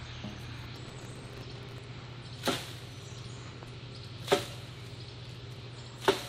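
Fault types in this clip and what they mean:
processor overload crackle: 0.76 to 1.81 s, a gritty crackling tear as dozens of very short buffers, around 1.5 ms each, miss deadlines and replay stale audio with hard edges.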